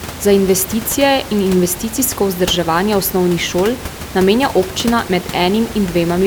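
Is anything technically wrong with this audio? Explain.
No, nothing is technically wrong with this audio.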